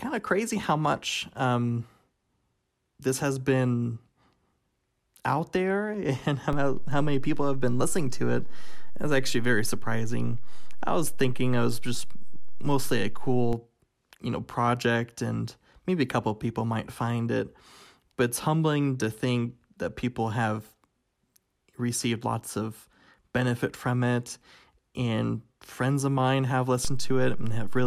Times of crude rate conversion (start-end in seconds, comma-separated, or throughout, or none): none